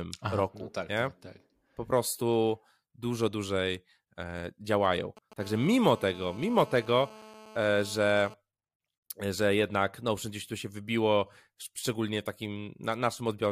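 From 4.70 to 5.34 s, just after "prostu dużo dłużej e", GSM signalling bursts from a nearby 2G phone leak in as rectified radio pulses. They form a galloping pattern of short 217 Hz buzzes, roughly 20 dB below the speech. From 5.40 to 8.34 s, a steady GSM phone buzz follows, which fits the phone being in a call. This hard, raspy 217 Hz tone is rich in harmonics, sits about 21 dB below the speech, and is unrelated to it.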